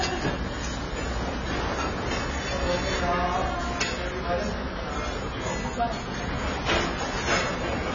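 Throughout, the sound is dull and coarse, likely from AAC compression. Nothing reaches above 7 kHz, which on a spectrogram appears as a flat ceiling. The heavy damage points to a bitrate near 16 kbps.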